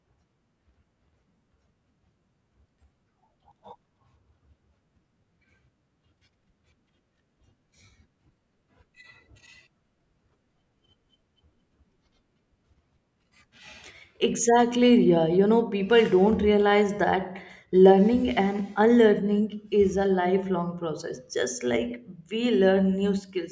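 Nothing in this stretch of speech gives a listener any technical problem to point to.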